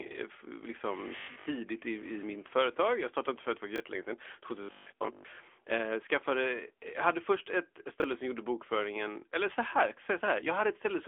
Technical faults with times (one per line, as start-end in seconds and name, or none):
0.00-11.07 AMR narrowband mobile codec
1.16-1.46 robotic sound from repeated short buffers
3.76-3.80 chunks out of order
4.63-5.37 robotic sound from repeated short buffers
8.00-8.04 chunks out of order